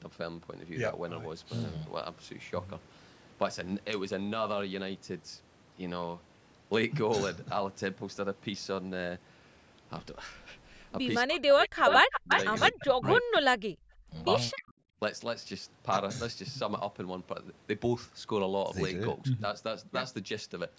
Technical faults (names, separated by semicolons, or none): speech suppressed in double talk; echo leak